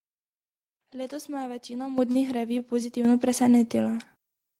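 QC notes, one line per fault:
1.98 s, 3.05 s and 4.07 s: microphone volume stepped up. Voice and background together jump louder in a single step, by about 10 dB after "me je večina", then by about 7 dB and about 4 dB. Each time, the call software judged the microphone too quiet and raised its input gain.
2.11–2.18 s: short stall from a late packet. Just after "me je večina", a sound hangs on slightly too long with a slight buzz or dip. A packet arrived late and the jitter buffer ran dry, so the receiver stretched the last sound by 36 ms and then resumed where it stopped, with nothing lost.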